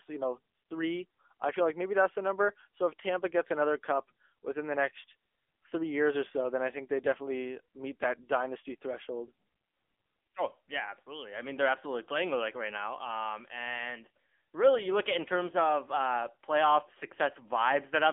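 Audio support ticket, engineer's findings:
AMR narrowband mobile codec, full length of speech. Telephone band, roughly 250 Hz to 3.5 kHz, nothing above 3.6 kHz. Plainly audible buzzy, synthetic texture. Vocal-tract model with sparse pulse excitation in 20 ms frames; buzz points to a mid-rate mode near 7.95 kbps. Unlike a plain low-pass or band filter, the coding itself adds the buzz and artificial timbre, not just missing highs.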